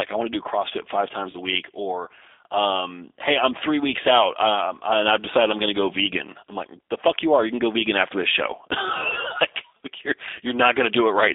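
Speech carried throughout by the G.729 codec, heard as telephone band-limiting between roughly 300 Hz and 3.6 kHz with a plainly rough, synthetic texture, consistent with G.729A at 8 kbit/s rebuilding the voice from a coarse filter and sparse pulses. At 1.31 to 1.37 s, just before "a week or um", VoIP packet loss concealed by the speech codec appears: about 30 ms of sound drops out, which fits a single lost packet, and the decoder stretches the previous pitch and spectrum into a fading fill. Because each frame depends on the last, the recovery stays weakened for some tens of milliseconds afterward.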